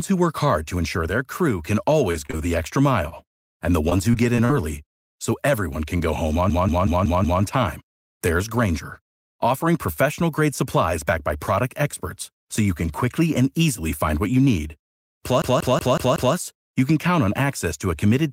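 From 2.11 to 2.41 s the speech breaks up with repeated packet loss, giving a robotic, choppy texture. Four gaps fall in this 0.3 s stretch, the longest 32 ms. The receiver patches each one by extending the preceding sound, so about 100 ms of the span is synthetic fill, roughly a third of it, and about 60 ms of real audio never arrives.

At 3.09 to 3.14 s there is a short stall from a late packet. The jitter buffer ran dry, and the receiver held the last sound for 24 ms until the packet turned up, then resumed where it left off. Nothing is lost. The sound is simply drawn out slightly, with a faint buzzy hold.

From 3.90 to 4.51 s the repeated packet loss returns, again as four gaps, the longest 43 ms. The fill is sparser here, about 97 ms or 16% of the span, but about 100 ms of audio is missing. The result is the same robotic, choppy quality with pieces of the speech cut out.

At 5.97 to 6.01 s a short concealed packet loss drops about 20 ms, bridged by 19 ms of extrapolated sound. 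It comes across as a brief smear or wobble, and a short consonant here could be swallowed.

From 6.50 to 7.43 s a system hang loop sets in. The playback side stalled while the audio hardware kept cycling its ring buffer, so one 186 ms fragment plays five times over at about 5.4 repeats per second. That fits an 8192-sample buffer. It sounds like a machine-gun stutter, and little or no audio is lost. The identical hang loop recurs from 15.42 to 16.35 s.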